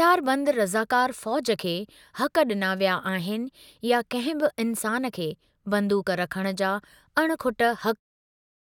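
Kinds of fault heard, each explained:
Nothing wrong turns up here; the speech just tapers gently away right at the end, around 8 s, the way an editor would finish it off.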